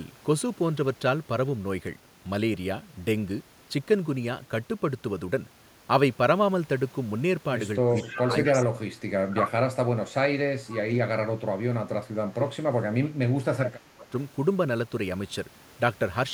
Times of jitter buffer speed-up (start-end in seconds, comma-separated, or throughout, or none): none